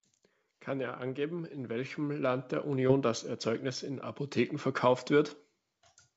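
From 0.65 s to 4.11 s, automatic gain rising sets in: the gain control judged the input too quiet and kept raising its gain, about 8 dB in total. Voice and background noise swell together over those three and a half seconds rather than jumping.

Partway through that rise, from 2.88 s to 2.91 s, a short concealed packet loss occurs. Roughly 20 ms of audio never reached the decoder in time, so the receiver extended the preceding sound and blended back into the real signal, leaving a brief smeared wobble in the speech. As expected for a G.722 call path, nothing sits above 8 kHz.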